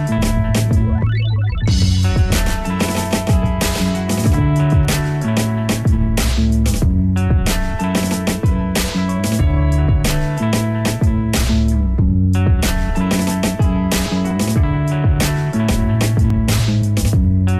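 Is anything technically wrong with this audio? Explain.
Yes, there are two problems. From 1.77 to 4.85 s there's a doubled audio track: a full-band second copy trails by around 150 ms at about 5 dB down. It's likely a slower capture path recording the same sound again. With no room colour, it's a hard echo that cuts in and out abruptly.

The other issue is overlap between stream segments, which causes short clicks or skips at 4.34, 14.31 and 16.30 s. Timestamps on adjacent segments overlap, so the player trims away about 6 to 19 milliseconds of real sound and the waveform jumps. The spacing points to 2-second segments.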